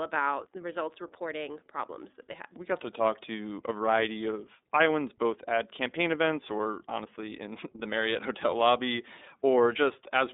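From start to finish the speech runs through the iLBC codec, and the damage is plainly audible. The band sits between roughly 250 Hz and 3.7 kHz, with nothing at all above 3.8 kHz, so it has that thin telephone quality. Each frame's excitation is coded on its own, which fits 30 ms frames at the 13.33 kbps mode, and that leaves the voice slightly rough and synthetic.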